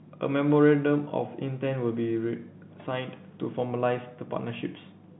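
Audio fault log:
No faults heard anywhere in this speech.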